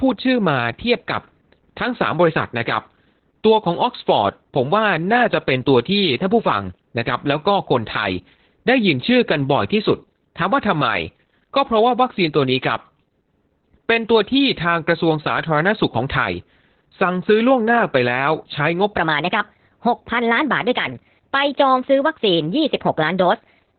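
Opus voice compression runs through the whole clip. The band stops near 4.3 kHz, with nothing above it, which points to the narrowband SILK mode at a very low rate, around 8 kbps. At that rate the linear-prediction coder describes the excitation only coarsely, frame by frame, so the speech comes out muffled, hoarse and slightly robotic, with sibilants and breath flattened into a dull, boxy tone.

A section at the wrong speed begins at 18.97 s and lasts to the end. The sound there plays about 1.32 times too fast, so pitch rises with tempo, about five semitones, and the speech turns high and hurried. Pitch and pace shift together, so the section was likely fitted to the wrong clock during editing or playback rather than processed by a pitch shifter.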